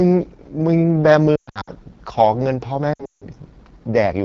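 The whole clip of speech runs through the AMR wideband (HD Voice) codec, and the damage is plainly audible. Everything carries a rough, raspy edge, which points to one of the codec's two lowest modes, around 8.85 kbit/s. At that rate the pulse-driven vocal tract model can't track the voice closely, and the top band above 6.4 kHz is just shaped noise.

Then there are lost AMR speech frames, first between 1.36 and 1.70 s. The losses are scattered, with the longest unbroken gap about 120 ms. The decoder keeps repeating the last good pitch and vocal tract settings at falling gain, so the sound warbles, fades out fast, and comes back weak and rough. It happens again from 2.93 to 3.25 s, where the longest run is about 160 ms, long enough for the voice to drop nearly to silence before it recovers.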